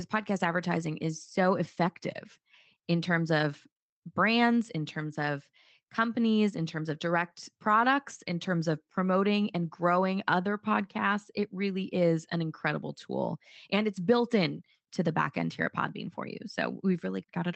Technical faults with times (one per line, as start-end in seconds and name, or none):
none